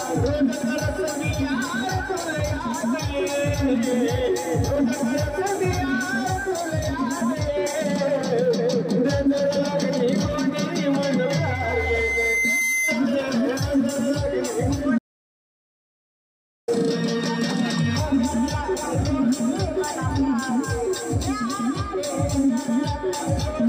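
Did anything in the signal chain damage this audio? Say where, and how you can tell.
Yes. Loudspeaker feedback squeal runs from 11.01 to 13.06 s, in the acoustic and analogue loop where a microphone hears its own loudspeaker. A single 2.1 kHz tone swells over roughly a second and a half to about the level of the programme, because loop gain at that frequency exceeds unity.

An audio dropout to silence follows from 14.99 to 16.68 s, losing 1.69 s. The sound cuts out and resumes mid-flow, and the gap is silent with no room tone. The likely cause is a lost input device or link feeding the recorder, which kept writing silence.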